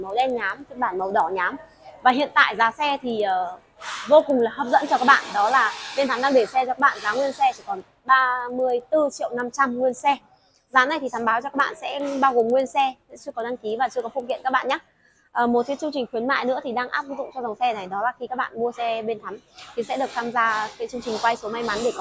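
From the start to about 15.4 s there's a steady ticking at 10 per second, the signature of a resampler restarted on every block. The sound, which fits a conversion from 44.1 kHz down to 16 kHz, was cut into 100 ms blocks and each one was converted in isolation. At every edge the filter saw silence or the wrong end of the block instead of the real neighbouring samples, leaving a small glitch each time. The ticks come only where there's signal.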